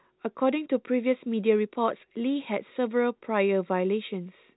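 A speech clip with nothing technically wrong with it, carried over G.711 telephone coding with the usual cut-off at about 3.9 kHz.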